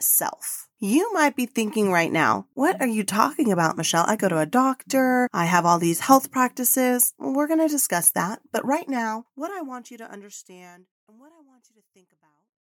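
No faults to report in the speech; the level simply eases down in a deliberate fade-out from around 8.5 s to 12.6 s.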